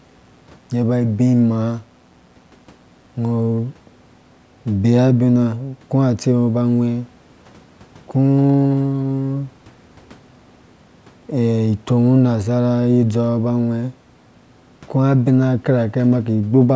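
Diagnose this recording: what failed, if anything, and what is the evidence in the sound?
The analogue wiring let in mains buzz from 0 to 3.16 s, a faint raspy 60 Hz buzz well below the speech. Switching spikes enter every half-cycle, so the spectrogram shows a comb of lines at 60 Hz multiples, and the waveform shows small spikes 120 times a second.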